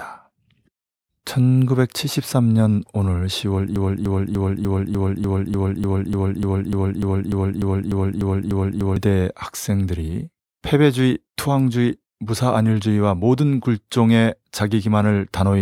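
From 3.76 s to 8.96 s the speech falls into a broken-record loop: one 0.30 s fragment plays 18 times back to back, identical each pass, likely from a stalled player or stream resending its last buffer. Unlike an echo, nothing decays, and the intervening speech is lost.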